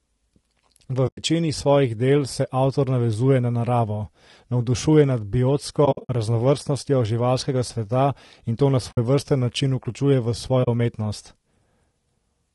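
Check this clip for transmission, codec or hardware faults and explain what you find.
Two faults are audible: a codec roughness across the whole speech clip, and four short dropouts.

Low-delay AAC compression: throughout, the speech sounds rough and grainy, with noise filling the gaps between harmonics and a thin, synthetic top band. This is likely AAC-ELD, whose short frames resolve pitch poorly, and the damage fits a bitrate near 32 kbps.

AAC frame loss with muting: soft-edged holes appear at 1.07–1.23 s, just before "svojih del se avtor"; 5.85–6.1 s; 8.92–8.98 s, between "sveta in to na" and "način vključuje v"; and 10.63–10.68 s, after "način vključuje v". Lost frames were zeroed, and overlapping windows fade the sound out and back in. The gaps total 120, 160, 60 and 40 ms respectively, with the first two broken up, the longest continuous silence around a tenth of a second.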